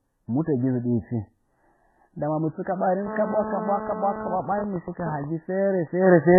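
All the way through, the speech sounds muffled and smeared, with nothing above about 2.1 kHz. That's likely transcoding between lossy codecs: a very low-bitrate MP3-style pass, then HE-AAC, then WMA. Each stage re-encodes the last one's mess, so their artefacts pile up and the lowest cut-off sticks.

From 3.07 to 4.36 s there's a hard, raspy GSM phone buzz at 217 Hz, loaded with harmonics and about 8 dB below the speech. A 2G phone in a call was sitting close enough for the audio circuit to rectify its transmit bursts, so the buzz stays steady and ignores the speech.

Right after that, from 4.40 to 5.24 s, it turns into GSM signalling bursts, even ticks with a longer 217 Hz buzz twice a second, roughly 5 dB under the speech. A phone is in a call, but its user has gone quiet, so it only sends occasional groups of bursts.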